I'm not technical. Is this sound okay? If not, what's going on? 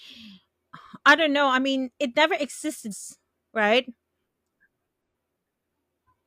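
No. Parts of the compressed audio data were damaged, so the player briefly lost its place and had to search for the next readable chunk. This damaged data in a compressed stream causes short chirps or blips: at 2.88 to 2.94 s just after "I mean it never", at 5.01 s, and at 6.04 to 6.07 s.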